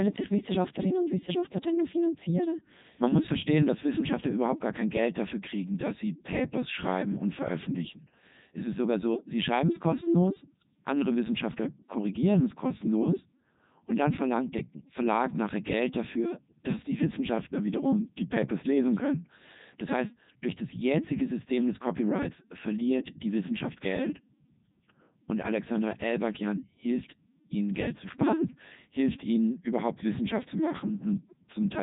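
From start to finish the speech sounds robotic and buzzy, with nothing above 3.8 kHz. This is the Codec 2 vocoder, heavily damaging, at a rate that fits 3.2 kbit/s: only pitch, voicing, energy and spectral shape survive, and the decoder rebuilds the voice from sine waves.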